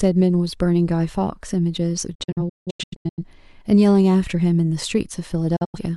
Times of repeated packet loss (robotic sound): none

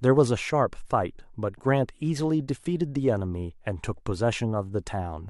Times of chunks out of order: none

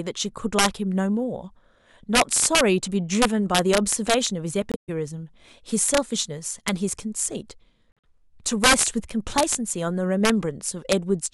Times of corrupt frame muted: 4.72-4.90, 7.91-8.05

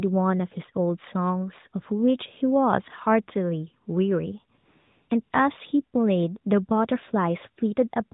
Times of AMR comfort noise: 4.58-5.32

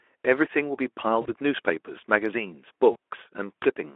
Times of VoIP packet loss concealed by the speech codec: 1.22-1.30, 2.91-2.96

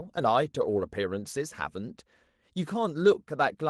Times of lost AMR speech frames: none

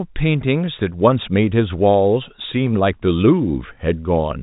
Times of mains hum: none

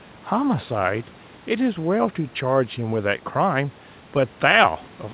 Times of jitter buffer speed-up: none

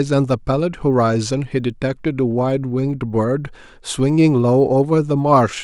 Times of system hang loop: none

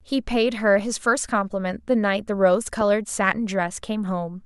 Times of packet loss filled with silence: none

